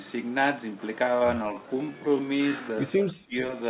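From 1.0 s to the end, the audio was most likely run through a time-stretch that slowed it to about 0.615 times its pace while keeping pitch by repeating short pieces. This time-stretched section makes the speech abruptly drag at unchanged pitch.

From 2.98 to 3.37 s, the echo canceller apparently could not tell the near talker from loudspeaker echo during double talk and pulled both down. The speech suppressed in double talk dips by roughly 25 dB for around 0.4 s, all within a band that stops at 4 kHz, consistent with a G.711 call path.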